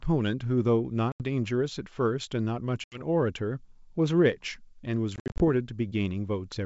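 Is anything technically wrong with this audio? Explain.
Yes. Packet loss on an ADPCM call occurs at 1.12–1.23 s and 2.84–3.02 s (about 80 ms lost each), and at 5.16–5.42 s, where 160 ms is lost in scattered gaps up to 60 ms long. Missing packets become hard-edged silence. The decoder's predictor and step size then no longer match the sender's, so the speech returns with brief, slight distortion before settling. That uneven recovery distinguishes it from a clean dropout.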